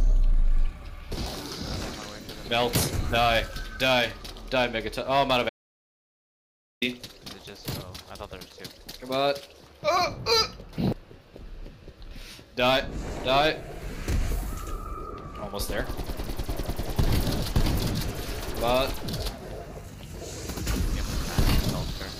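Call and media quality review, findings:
Audio dropout to silence, 5.49 s to 6.82 s. Sound cuts off mid-flow, returns abruptly. Gap is digital silence, no room tone. About 1.32 s of content lost. Likely cause: input device or link lost, recorder kept writing zeros.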